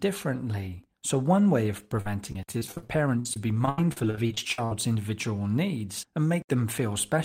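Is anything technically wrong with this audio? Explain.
Yes. From 2.01 to 4.72 s the speech turns choppy and robotic, with short pieces missing, the longest about 74 ms. This is repeated packet loss: audio kept failing to arrive, and each hole was patched by extending the preceding sound, so roughly a quarter of that stretch is filled in.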